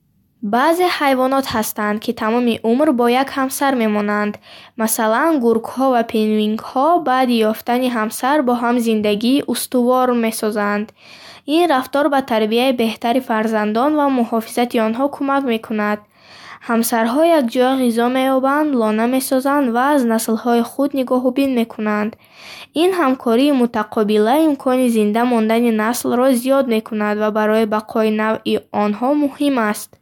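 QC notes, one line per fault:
No faults heard anywhere in this speech recording.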